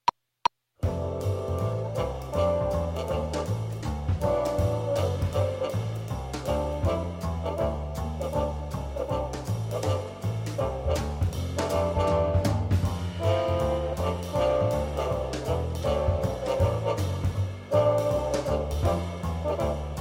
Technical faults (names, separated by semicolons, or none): none